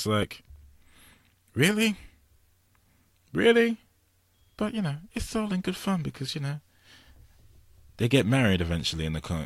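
No technical faults can be heard anywhere in this speech clip, so there is nothing to describe in time order.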